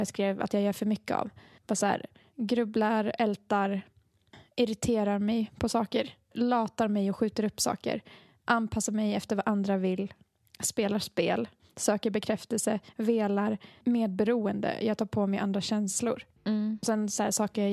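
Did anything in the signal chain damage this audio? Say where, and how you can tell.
No, nothing in this speech recording stood out as damage from any stage of the chain when I listened to it.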